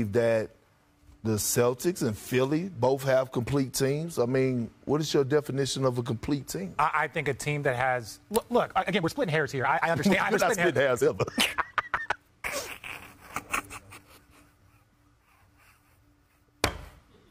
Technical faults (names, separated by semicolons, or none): time-stretched section